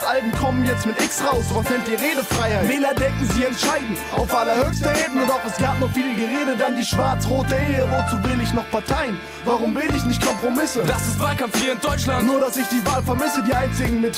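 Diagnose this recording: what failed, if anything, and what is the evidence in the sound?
Nothing failed here as far as I can hear; every stage from capture to playback seems to have done its job, and there's no evidence in the sound of any problem to chase down.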